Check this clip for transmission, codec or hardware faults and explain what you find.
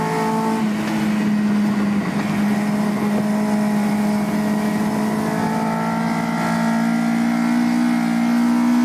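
Nothing wrong turns up anywhere in this audio.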